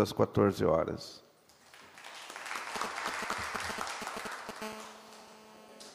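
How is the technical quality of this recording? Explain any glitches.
The recording is compromised by radio interference from a nearby 2G phone in its second half, plus a brief decoding scramble near the end.

GSM signalling bursts, 2.76 to 4.51 s: a phone exchanging control traffic sends short groups of radio pulses at 216.7 Hz, which the audio circuitry rectifies. The result is a galloping dit-dit-dit of short buzzes, nearly as loud as the audio itself.

GSM phone buzz, 4.62 to 5.90 s: once the phone is in a call, it transmits continuously at 216.7 bursts per second, and the rectified pulses produce a steady, hard, raspy 217 Hz buzz full of harmonics. It sits about 15 dB below the audio and is unrelated to it.

Frames out of order, 5.22 to 5.33 s: two adjacent blocks, each 52.2 ms long, were decoded in swapped order, which points to pairs of codec frames arriving out of sequence. That stretch plays with its halves exchanged, giving a garbled flutter. 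No time is lost.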